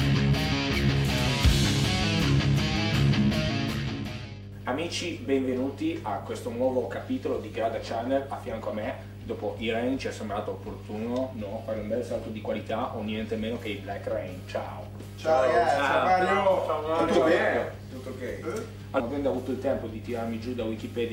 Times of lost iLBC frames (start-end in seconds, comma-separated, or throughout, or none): none